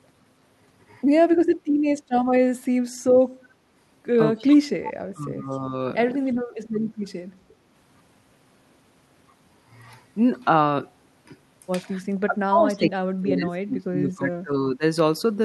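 At 3.29 s the room background drops away until 3.75 s. This is background gated by the echo canceller. The loudspeaker was playing, so the canceller turned the microphone down hard, by about 11 dB at the deepest. The room tone sinks and then comes back once the canceller releases. The whole dip lasts under half a second.

From 4.39 to 4.73 s the speech dips sharply, by roughly 35 dB at worst. This is speech suppressed in double talk, likely because both ends spoke together. The canceller could not tell the local talker from the loudspeaker echo, so it pulled everything down.

Inside that dip, from 4.51 to 4.55 s, a brief echo leak appears. A faint copy of the speech returns about 0.3 s late, some 20 dB below the direct speech. The canceller on the loudspeaker side likely missed part of what its microphone heard.

The speech is suppressed again from 5.14 to 5.73 s, this time by about 15 dB. 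A second echo leak sits at 5.51 to 5.58 s, with the same delay near 0.3 s. It is much fainter, around 35 dB down.

A short dip of about 20 dB follows at 6.93 to 6.99 s.

The longest suppression runs from 12.01 to 14.83 s. The speech drops by up to about 25 dB, in pieces totalling around 2 s.

Throughout, the band tops out near 12 kHz, which fits an Opus call codec.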